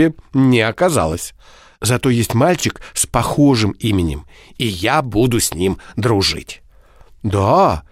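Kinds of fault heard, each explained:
Bluetooth stutter: In this speech clip, at about 2.60 to 2.64 s, just before "с похожим именем и", the wireless link failed to deliver audio in time, so the receiver filled the hole by replaying its last short slice, about 23 ms of sound. That gives one brief doubled flutter rather than a buzzing run, which points to a single late packet. Unlike a plain dropout, there is no silent gap, and the speech picks up later as though it had kept playing.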